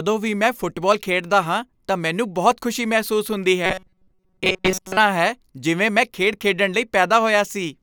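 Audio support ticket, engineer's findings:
Robotic sound from repeated short buffers, 3.66–4.97 s, right after "ਬਹੁਤ ਖੁਸ਼ੀ ਮਹਿਸੂਸ ਹੁੰਦੀ". Speech collapses into a rigid metallic buzz at 188 Hz that loosely follows the words. Likely cause: playback or jitter buffer underrun. Audio arrives too late, so the same ~5.3 ms block (1/188 Hz) is looped in place of most of the real audio, which is dropped.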